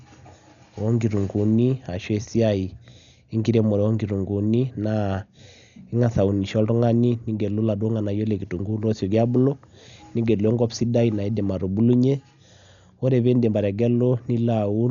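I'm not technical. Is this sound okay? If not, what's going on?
No. The speech has most likely been squeezed hard by Dolby Digital compression, a system that shrinks audio by spending very few bits on it. To save space, it discards everything above about 7 kHz, and many of the remaining details are replaced with filler noise. Throughout the clip, the speech therefore sounds dull and muffled, with a rough, fluttering grain clinging to it instead of clean detail.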